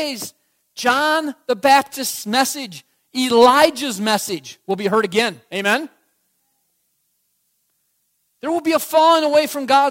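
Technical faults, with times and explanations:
No technical faults can be heard in this speech recording. Nothing in the audio calls for a time or an explanation.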